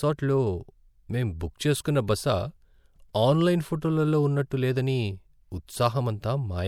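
A short speech recording with pre-echo at two points: 1.84 s, just after "మేం బుక్", and 3.13 s. A short hiss of about 13 ms and 14 ms precedes each sharp onset, where transform-codec quantisation noise spread across the block fills the quiet gap before the attack and smears it.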